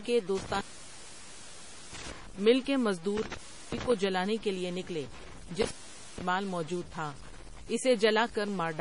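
Speech that sounds grainy and rough throughout, with a gritty distortion riding on the voice and shifting with it, so quieter passages turn sandy and the softest moments sputter or drop out. The error sits only about 20 dB below the signal. The likely cause is low bit depth without dither. The samples appear to have been truncated to very few levels, which fits roughly 6 bits, and with no dither the rounding error tracks the signal instead of settling into steady hiss. Layered over that is a watery, swirling quality with metallic chirps on sibilants and smeared onsets, and nothing at all above 10.6 kHz. That points to heavy MP3 compression at a low bitrate, likely around 32 kbps. Short of bits, the encoder discards the top of the spectrum and switches weak frequency components on and off from frame to frame, which produces the chirping and swirl. The sound also cuts out three times with crackle at the edges, from 0.37 to 2.12 s, 3.17 to 3.92 s, and 5.62 to 6.22 s. 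The dropouts last about 1.32 s, 0.35 s and 0.48 s, leaving only faint residue while the line is open. That is an intermittent contact, a loose cable or plug briefly breaking the connection and crackling as it opens and closes.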